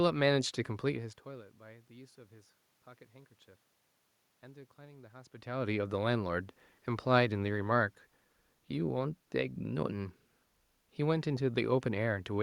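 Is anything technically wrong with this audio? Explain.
No, nothing technically wrong with this audio.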